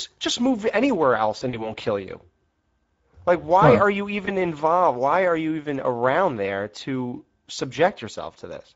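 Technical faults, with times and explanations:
Throughout: Speex codec. Hoarse, noisy speech, consistent with a mid-rate setting near 17 kbps. Few excitation bits blur the harmonics on a spectrogram and leave noise-like fill above 4 kHz.
1.37–1.72 s: VoIP packet loss concealed by the speech codec. Scattered gaps, the longest about 40 ms, are filled by decaying extrapolation. The spectrogram shows smeared, fading harmonics and the waveform sags.
4.25–4.31 s: VoIP packet loss concealed by the speech codec. A brief extrapolated stretch fades and recovers weakly, seen as a short smeared patch with a dip in the waveform envelope.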